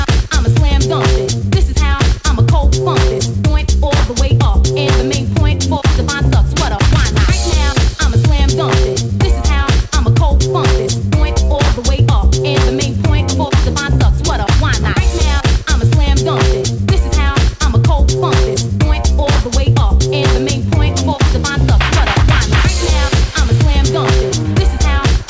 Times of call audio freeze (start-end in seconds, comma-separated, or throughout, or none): none